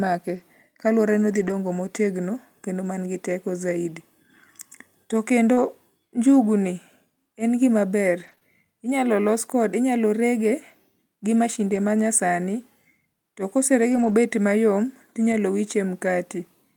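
At 0.35 to 0.41 s and 1.31 to 1.53 s, just before "motegno kendo man gi", there are lost packets rebuilt from error correction. The following packets carried low-bitrate copies. The speech does not drop out but turns rough and noisy. From 5.53 to 8.43 s there are scattered short gaps. About three gaps from late or lost packets were patched by extending the last sound, the longest around 30 ms. They come through as brief ticks and smears. More error-correction rebuilds follow at 11.72 to 11.78 s, 13.92 to 14.14 s, and 15.32 to 15.34 s, each briefly coarse and grainy.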